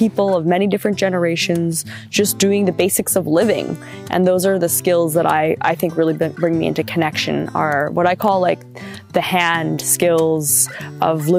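Single sharp clicks at 4.74, 8.28 and 9.55 s are likely dropped samples: a tiny fraction of a millisecond goes missing, so the waveform jumps straight to a later value. Unlike a dropout, no audible gap or silence follows, only a thin vertical line.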